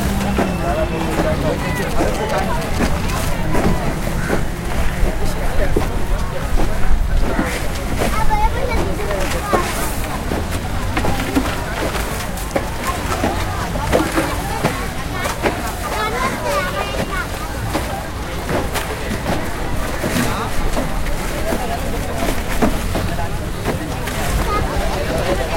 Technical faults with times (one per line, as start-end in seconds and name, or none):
1.82-3.25 GSM signalling bursts